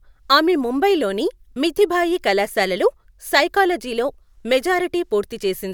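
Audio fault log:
No fault is heard in this audio.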